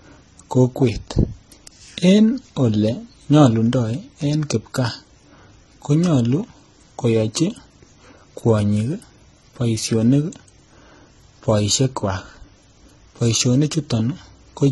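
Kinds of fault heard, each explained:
Transcoding between lossy codecs: The speech carries two layers of coding damage throughout. Nothing is heard above 11.8 kHz. A smeared, swirly texture points to very low-rate HE-AAC, which fits roughly 16 kbit/s. On top of it sit MP3-style warbling and smearing at sharp onsets, which fit a rate near 37 kbit/s. The cause is likely an HE-AAC encode later re-encoded to MP3. The second codec spent bits on the first codec's flaws.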